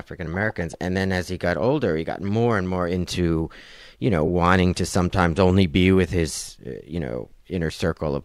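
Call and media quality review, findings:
Lost LE Audio frames at 4.27 s: brief noisy smear in speech, about 10 ms, fitting one lost LC3 frame. Decoder concealment repeated the last spectrum with random signs. Distinct from a dropout or click: no silent gap, no sharp edge, just a short hiss.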